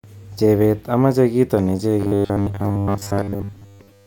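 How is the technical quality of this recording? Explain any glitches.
Robotic sound from repeated short buffers runs from 2.00 s to the end at 4.07 s. Audio likely arrived too late, so roughly 10 ms chunks were looped, covering most of the stretch and imposing a metallic 100 Hz buzz.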